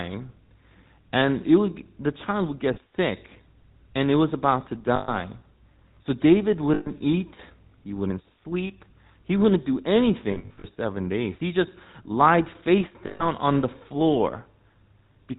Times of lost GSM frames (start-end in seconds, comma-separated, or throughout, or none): 2.74-2.78, 4.96-5.20, 6.74-6.91, 10.32-10.66, 13.06-13.28